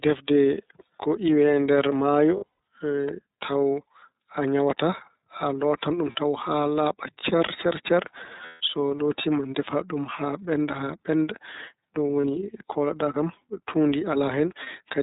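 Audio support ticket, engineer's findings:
Narrowband, slightly rough and synthetic tone across the whole speech clip. Nothing above 4 kHz. iLBC codec, damage plainly audible. Each frame's excitation is coded on its own. The sound fits 30 ms frames in the 13.33 kbps mode.

Lost iLBC frames at 2.37–2.58 s, 6.12–6.16 s, 8.46–8.61 s, 12.21–12.25 s and 14.63–14.68 s. Each gap is a held, buzzy vowel-like fill. The decoder repeats the last pitch cycle with noise. The first gap is broken up, with its longest run around a tenth of a second. Speech recovers at once.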